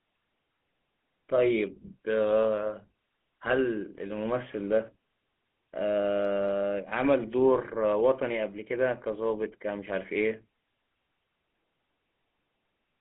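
From start to finish the speech has passed through the GSM full-rate codec, on a telephone line of roughly 200 Hz to 3.5 kHz, which fits GSM full rate at about 13 kbps. The codec rebuilds the voice from a vocal-tract model driven by a regular pulse train, keeping only a third of the excitation samples. The result is a plainly audible buzzy, gravelly roughness, with a thin, boxy tone and nothing left above 3.5 kHz.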